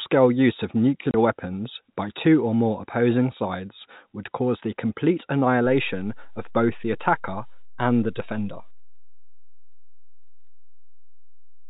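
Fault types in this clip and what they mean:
Packet loss filled with silence: one packet went missing and silence replaced it, leaving a 30 ms hole around 1.11 s with hard edges.
DC step: the waveform's zero line jumps at 5.66 s and stays offset to the end. This gives a low thump or click while the speech continues unchanged.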